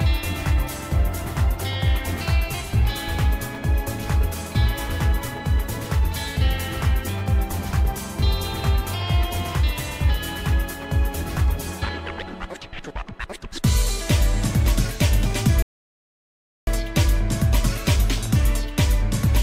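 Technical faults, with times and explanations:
15.62 to 16.67 s, rebuffering stall: playback halts into silence for about 1.05 s while data catches up, then resumes exactly where it stopped, so time is added but no audio is lost, unlike a dropout.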